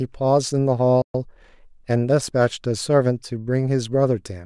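A playback stall at 1.02 s silences the speech for about 0.12 s, likely because the player ran out of buffered data before recovering. Time-compressed catch-up runs from 1.15 to 2.37 s, where cross-faded cuts clear the backlog, hurrying the speech to 1.1x at normal pitch.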